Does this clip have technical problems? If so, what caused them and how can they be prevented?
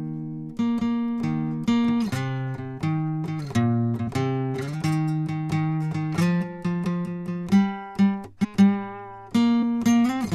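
Yes. Compressed frames were skipped: the decoder dropped whole frames that were missing or damaged. The music jumps ahead by about 100 ms at 4.07 s, 300 ms at 8.43 to 8.45 s, and 150 ms at 9.62 s. The jumps span roughly 4, 10 and 7 frames of 23.2 ms. To prevent this, check file integrity with checksums after transfer or storage and re-fetch any file that fails.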